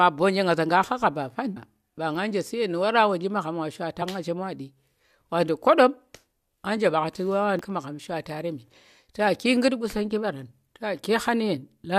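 At 1.56 s, 4.01 s and 7.59 s the speech is broken by a quick glitch, a chirp, squawk, click or short hole, each lasting well under 20 ms. That's damaged data in a compressed stream. Some bytes in the encoded file were lost or scrambled, so the decoder misread those frames, lost its place and hunted for the next valid frame header before picking the audio back up. That brief scramble is what you hear as the glitch.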